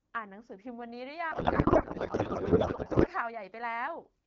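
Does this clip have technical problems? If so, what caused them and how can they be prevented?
Yes. From 1.31 to 3.08 s a codec payload misread replaces the speech with garbled noise and warble that barely follows it. The AMR-WB frames were likely packed octet-aligned but unpacked as bandwidth-efficient, so every field sat in the wrong place. Agreeing on one payload format on both ends during session setup prevents it.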